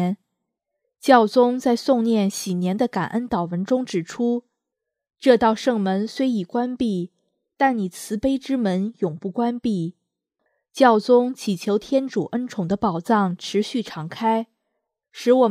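No dropouts, glitches, distortion or other technical faults are audible anywhere in the audio.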